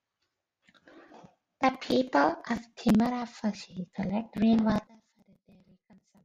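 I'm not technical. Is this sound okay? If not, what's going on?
No, not quite. From about 4.87 s to the end at 6.24 s the speech suddenly drops away and goes faint. That's most likely one channel inverted: one side of the stereo got flipped upside down, so when the two sides are mixed together, the voice in the middle cancels itself out and only a weak trace survives.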